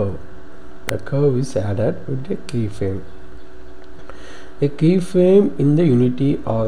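A single electrical switching spike at about 0.89 s is heard as a sharp snap on top of the audio, likely from a nearby switch, motor or static discharge arcing into the line. The waveform shows one narrow isolated spike, and the spectrogram shows a thin vertical broadband line.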